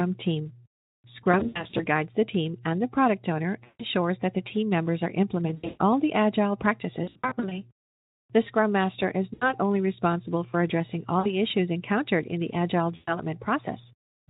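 VoIP packet loss concealed by the speech codec hits at 1.23–1.86, 3.64–3.84, 5.48–5.81, 7.03–7.62 right after "all the agile", 9.33–9.53, 11.20–11.32 between "only responsible for addressing" and "issues encountered in the", and 12.96–13.16 s. Each time, the decoder stretches its last sound into a fading buzzy tone or coloured noise that stays weak for a moment after packets resume.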